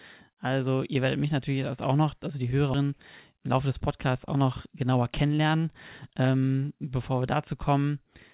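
A speech clip carried over a call path, with nothing above 4 kHz and the usual coding noise that fits a narrowband G.711-style codec. At 2.74 to 2.76 s there is a skip ahead. About 0.4 s of speech is simply gone. No gap or fill is heard. The audio on either side is butted together. This points to late audio being thrown away, in transit or by an overflowing jitter buffer, while newer audio was already queued. From 3.37 to 5.61 s comes a jitter buffer speed-up. The speech runs about 8% fast with its pitch unchanged, so it sounds hurried. The buffer was holding more audio than its target. It trimmed small pieces, one or a few pitch periods at a time, over and over. Together they take out roughly a fifth of a second and bring the delay back down.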